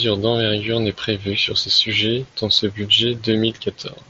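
Nothing goes wrong anywhere in this bit of speech; it has come through a Bluetooth headset's mSBC link, so there's simply nothing above 7.7 kHz, which is just how that wideband path carries sound.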